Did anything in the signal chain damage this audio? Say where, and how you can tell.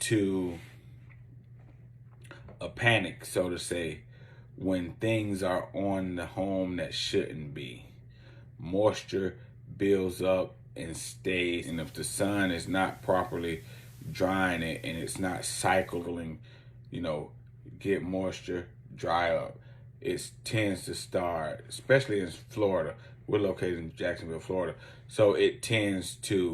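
Yes. The damage happened at the receiver, before any recording stage: a digital radio blending to analogue event. From 11.59 s to 16.10 s the sound cross-fades over about 134 ms to the FM broadcast of the same station, with hiss rising to roughly 30 dB below the programme and the level shifting by about 2 dB. It then blends back to digital. A codec dropout or gap would be abrupt, whereas here the transition is a smooth fade and the FM noise floor appears only for that stretch.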